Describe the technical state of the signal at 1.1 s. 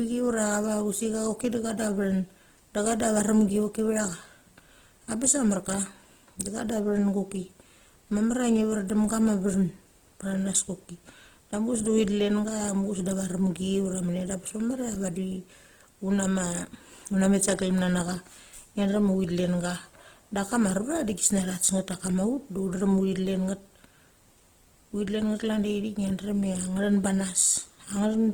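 Opus compression damage is present at 1.1 s and runs through the whole clip. The speech keeps its full bandwidth, reaching up to about 20.1 kHz, but the encoder was starved of bits. It held the energy of each band and filled in missing detail by folding lower bands upward or with noise. The result is clearly audible graininess and roughness, not swirling holes, which points to Opus music mode at likely around 16 kbps.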